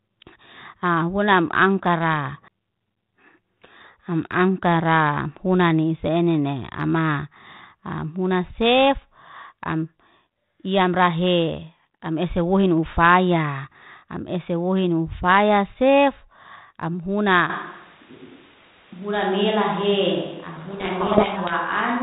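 At 17.50 s, just after "wohin nufaya sef am", the speech suddenly turns roomy and hollow, loses its low end, and drops by about 5 dB, with background noise now sitting roughly 25 dB under the speech. This is most likely a switch to a distant microphone, with the close microphone's signal lost and a farther one taking over. Unlike a reverb or equaliser change, the room, the thinner bass and the raised noise all arrive together in one step and stay to the end of the clip.

From 20.56 to 21.55 s, the speech on that distant pickup is buried under harsh, grinding distortion for about a second, then clears. This is a codec payload misread: the decoder took the bits of each G.726 code word in the wrong order, so it rebuilt wrong sample differences from frames that otherwise looked valid. The telephone band and light coding damage of the 32 kbit/s G.726 path run throughout. What separates this fault from ordinary low-bitrate rasp is the sharp start and stop, and the far heavier distortion that swamps the speech instead of riding quietly under it.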